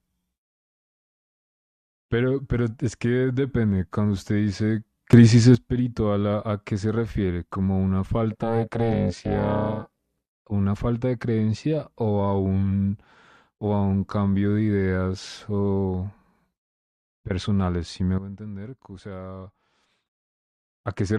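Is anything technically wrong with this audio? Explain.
Yes, the speech has two kinds of technical fault.

From 5.13 to 5.55 s, and again from 18.18 to 20.06 s, there is a sudden gain jump, likely from a gain setting applied instantly with no ramp. The first raises the level by about 11 dB, the second drops it by about 13 dB, and the voice and background noise shift together at each edge.

Between 8.32 and 10.43 s there is overlap-add ripple. The audio was split into windowed frames and rejoined with an overlap whose gain does not sum evenly, so the level swings by about 60 dB once per frame, around 300 times a second, giving a harsh, robotic buzz.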